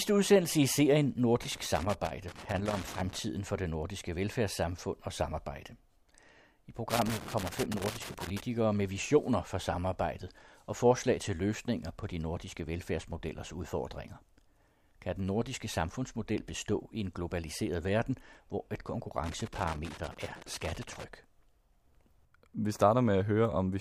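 Speech with loose connector crackle in three bursts: 1.43 to 3.19 s after "udsendelse i serien", 6.90 to 8.40 s before "med visioner for samarbejdet", and 19.24 to 21.04 s after "globaliseret verden hvor et". A worn contact intermittently breaking the line chops the signal into irregular crackle and scratching.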